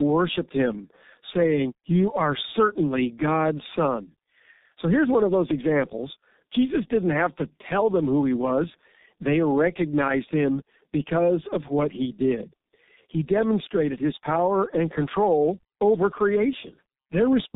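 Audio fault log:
Throughout, tandem speech coding: two low-rate codecs in a row, fitting AMR-NB then G.723.1, stack their damage, so the speech is rough, warbly, muffled, with nothing above 3.8 kHz.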